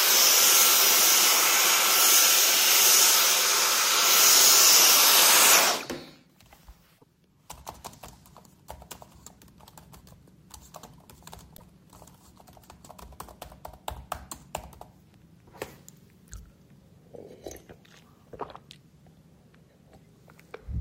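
At 6.97 to 7.04 s and again at 11.56 to 11.62 s, the sound skips forward and about 60 ms of chirp, noise burst or short hole replaces it. The likely cause is a broken MP3 bit reservoir: frames were lost, so the next frames drew their borrowed bits from the wrong bytes and decoded garbage for two or three 24 ms frames. The waveform shows a matching discontinuity.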